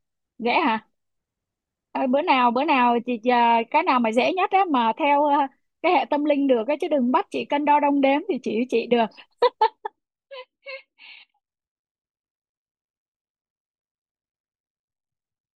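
From 9.61 to 10.24 s the speech shows zipper noise. A level drop of around 15 dB is applied as a series of discrete gain steps, roughly 200 per second, rather than as a continuous ramp. Each jump puts a small discontinuity in the waveform, so a fine buzzing tick rides on the speech for the duration of the move.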